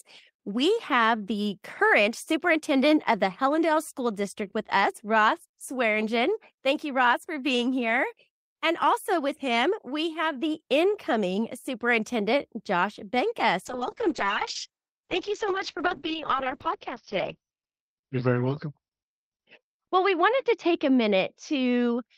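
A call bitrate drop begins at 13.66 s: the encoder's rate falls from 32 to 7 kbps, staying at its lowest for about 4.2 s. Coarser coding and a bandwidth cut from 20 kHz to 6 kHz leave the speech muffled and rough through to the end.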